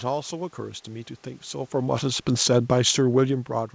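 Speech over a call path, with nothing above 8 kHz, which fits a wideband G.722 codec. The fault is automatic gain falling. From 1.73 s to 3.47 s the level sinks by about 4 dB, and the room noise drops with it. The gain control judged the input too loud, or its background noise too strong, and turned its gain down gradually.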